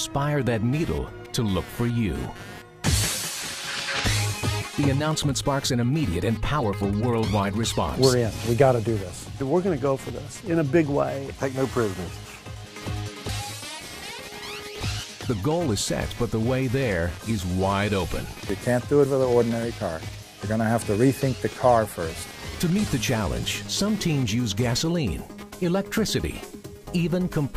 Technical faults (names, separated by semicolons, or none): computer activity noise